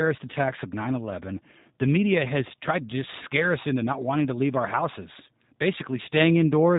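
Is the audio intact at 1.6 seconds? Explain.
No. At 1.6 seconds the speech carries G.729 codec damage, as it does through the whole clip. The sound is narrowband, with nothing above 4 kHz. It is also rough and slightly synthetic. That fits a low-rate coder near 8 kbit/s. Such a coder does not keep the waveform. It rebuilds the speech from a vocal tract filter, a pitch predictor and a few pulses per 5 ms subframe. The missing detail is plainly audible here.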